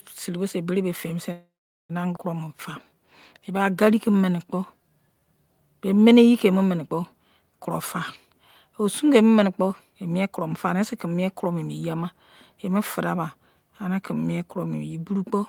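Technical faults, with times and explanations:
1.31–1.91 s, call audio freeze: the last sound buzzes or hisses on and fades into about 0.42 s of silence, likely held-up packets; the spectrogram shows smeared, decaying bands, then a blank gap.
2.15–2.18 s, skip ahead: about 0.3 s of sound is dropped and the two sides are joined almost directly, seen as an abrupt discontinuity in the waveform envelope.
2.45–5.26 s, jitter buffer slow-down: repeated pitch periods stretch this span to 88% speed, adding 334 ms; the spectrogram shows elongated harmonics at unchanged pitch.
9.16–11.47 s, jitter buffer speed-up: short pitch-period cuts run the sound at 107% speed, removing about 0.15 s; the spectrogram shows compressed syllables with unchanged harmonic spacing.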